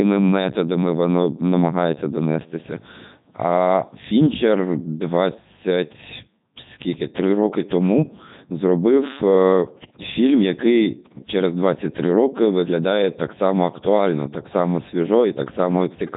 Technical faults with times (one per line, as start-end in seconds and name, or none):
0.00-16.16 Codec 2 vocoder